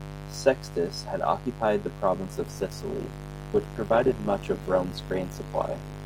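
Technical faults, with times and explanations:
Throughout, mains buzz: a steady, raspy buzz sits under the speech at roughly 10 dB below it. It's built on 50 Hz, but sharp switching spikes twice per mains cycle spread harmonics well up into the kilohertz range, which is what gives it that gritty edge.
2.22 to 6.05 s, adaptive stream at a lower bitrate: right after "had occupied the" the quality drops abruptly with no gap. Codec artefacts climb. That fits a stream falling back from about 64 to 16 kbit/s Opus.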